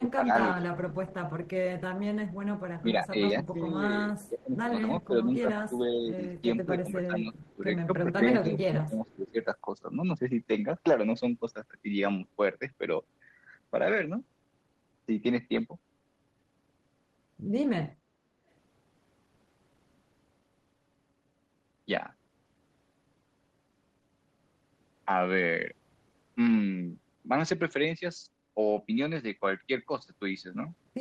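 From the start to 0.66 s, and again from 2.81 to 9.39 s, the speech repeatedly sinks by up to about 15 dB, dulls at the top end and breaks into pieces. In total this amounts to around a third of a second in the first stretch and roughly three seconds in the second. This is speech suppressed in double talk, likely an echo canceller that could not separate the near talker from the loudspeaker return while both sides spoke, so it turned both down. On a waveform the envelope shows abrupt dips and notches. A spectrogram shows the upper harmonics thinning or vanishing in patches.

Overlapping these stretches, a faint delayed copy of the speech trails about 439 ms behind the original. This is an echo leak, likely with residual loudspeaker pickup that the canceller failed to remove being sent back down the line. It appears at 0.59–2.34 s, 4.2–5.07 s, 6.18–6.22 s, 7.35–7.54 s and 8.58–9.32 s, sitting roughly 25 to 35 dB below the main speech. 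On a spectrogram it shows as weak, shifted ghosts of the harmonic patterns. These sit beneath a band limit near 12 kHz, which fits the Opus call path.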